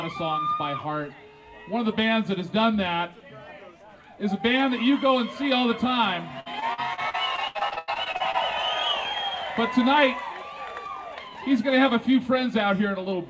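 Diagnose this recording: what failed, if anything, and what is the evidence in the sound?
The network is the culprit: repeated packet loss (robotic sound) from 6.40 to 8.36 s. It goes choppy and robotic as each hole, the longest 92 ms, gets patched by extending the last sound, covering about 30% of that stretch. Nothing above 8 kHz fits a G.722 call path.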